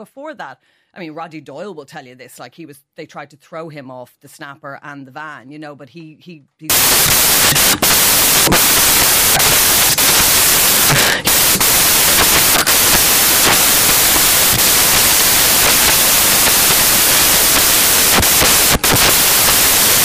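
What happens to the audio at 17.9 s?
Samples built from the wrong bytes run from 6.70 s to the end of the clip, covering the moment at 17.9 s. Each sample's bytes are assembled in the wrong order or alignment, so the rapidly changing low bits dominate, and the speech becomes loud, harsh noise, close to white on its louder sounds.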